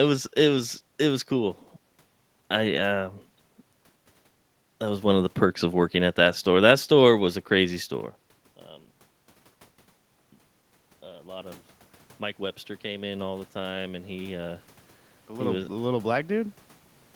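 A speech recording with automatic gain rising from 12.37 to 14.68 s, just before "the little was the": voice and room noise swell together by about 4 dB. The level change near 8 s differs because only the voice changes there.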